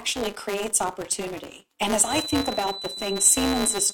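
All the way through the speech there's a filter restarted on every block: it drops its state each time, so a tick per block builds into a 200 Hz buzz tracking the level. From 2.0 s to the end a thin 4 kHz feedback whistle, slowly swelling and fading, sits well below the speech, likely a speaker-to-mic loop hovering right at the edge of feedback.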